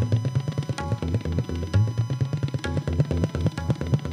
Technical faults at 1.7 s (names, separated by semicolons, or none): USB whine